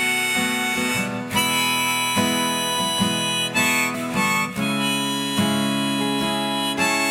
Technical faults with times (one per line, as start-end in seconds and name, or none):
none